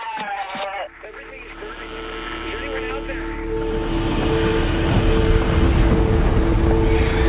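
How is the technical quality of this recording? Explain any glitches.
Nothing stood out as a glitch on listening, and the audio sits within the narrow band of a call line, with nothing heard above 4 kHz.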